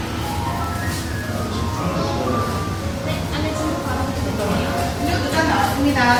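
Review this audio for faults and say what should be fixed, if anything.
Throughout, two kinds of compression smear overlap, with nothing above 20.1 kHz. This is likely transcoding between lossy codecs, consistent with WMA 96 kbit/s followed by Opus 32 kbit/s. To prevent it, encode once to Opus from the original lossless source instead of re-encoding an already compressed file.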